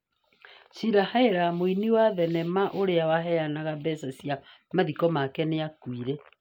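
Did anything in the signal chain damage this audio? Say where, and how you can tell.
No, nothing in this speech recording stood out on listening as a sign of damage anywhere along the chain.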